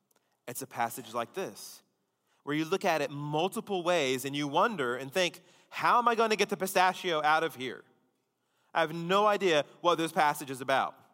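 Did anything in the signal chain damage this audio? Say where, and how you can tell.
No, nothing in the signal chain damaged this audio.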